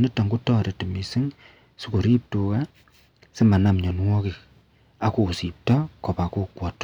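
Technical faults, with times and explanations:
2.12 to 2.15 s, 3.42 to 3.70 s and 5.70 to 5.75 s, hard clipping: in each burst the speech is pushed past the level the signal path can pass, by about 1 dB, 4 dB and 3 dB, so the waveform tops are sliced flat. Those flat tops add harmonics high in the spectrum. The first burst is a brief crackle, while the longer one near 3.4 s is pushed hardest.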